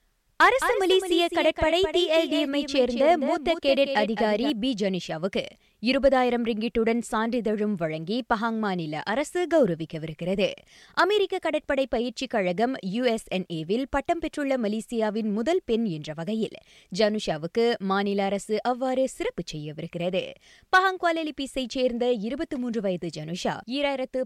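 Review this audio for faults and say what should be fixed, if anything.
A doubled audio track is present from the start of the clip until 4.5 s. A full-band copy of the speech trails the original by roughly a fifth of a second, sits around 10 dB lower, has no decay or room colour, and cuts off abruptly. The likely cause is the same signal being captured a second time through a slower path, or an edit leaving two out-of-step copies overlapping. To prevent it, route each source through a single capture path and check edit points for duplicated regions before export.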